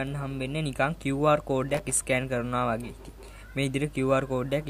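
From 1.69 to 2.01 s there is processor overload crackle: many missed buffer deadlines, each dropping a short stretch to silence, produce a gritty tearing burst.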